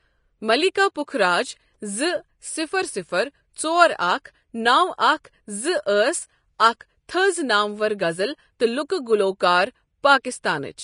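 A speech recording with plainly audible compression damage throughout, likely from Vorbis compression at a low setting: nothing remains above 10.5 kHz, and the coarsely quantised treble turns to grainy hiss and rough tone, which fits a bitrate around 33 kbps. Pre-echo occurs at 4.24, 6.59, 6.80, 8.89 and 10.23 s. The block's quantisation noise leaks 10 to 15 ms ahead of sharp onsets, as before "اَکھ تٕھز نامور غزل" and after "تٕھز نامور غزل تہٕ", leaving brief hiss and softened attacks.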